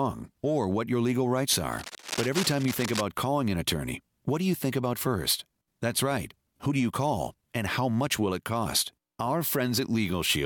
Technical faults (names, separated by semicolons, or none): cable scratch noise